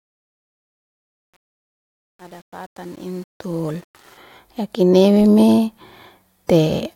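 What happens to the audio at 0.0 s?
The clip opens inside a fade-in that shows truncation distortion on a fade from 0.0 to 4.18 s, harshest until 3.68 s. Too few bits, fitting an 8-bit stage without dither, turn the quiet waveform into square steps, heard as grit before "ya kinewe me". A spectrogram shows broadband speckle.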